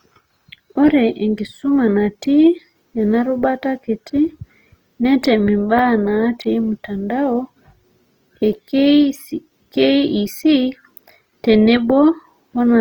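From start to finish the speech carries a rough, grainy texture with plainly audible damage, likely from Opus compression at a low rate, which fits about 24 kbps in the codec's music mode. Each band keeps its energy, so the top end still reaches about 20.2 kHz without MP3's swirling, watery holes. Instead, starved bands are filled with folded or noise-like content, so tonal parts of the voice turn hissy and coarse.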